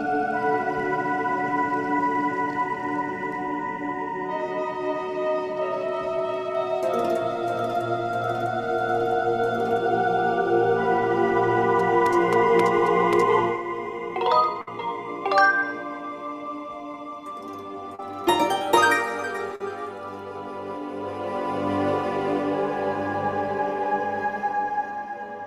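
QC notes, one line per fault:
14.61–14.68 s, burst of packet loss: a run of packets arrived too late or not at all, leaving a 55 ms hole. The receiver stretched the last sound across it and faded it as the gap went on, so depending on what preceded it you hear either a sustained tone or a dying hiss. About 60 ms of real audio is gone, so the sound picks up further on. The jump is what sets it apart from the short losses.
16.92–16.94 s, 17.95–18.00 s and 19.56–19.61 s, short concealed packet loss: brief stretches never reached the decoder in time and were filled for 14, 32 and 44 ms respectively, with about 10, 30 and 50 ms of original audio missing. Each fill extends the preceding sound, from its pitch or as shaped noise, then blends back into the real signal. The result is a quick smear or wobble with no sustained fade, and a short sound could drop out entirely.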